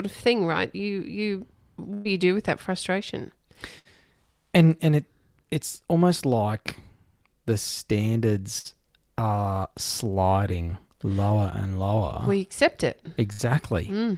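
Five bursts of packet loss show up in this speech clip. The first, at 1.93 s, is the longest: about 120 ms of audio is gone, and the receiver papers over it by stretching out the last bit of sound and letting it fade before the speech picks up further along. Shorter gaps of about 60 ms each follow at 3.79, 8.59, 10.62 and 13.32 s, each one a brief smeared, dying-off patch with a small chunk skipped.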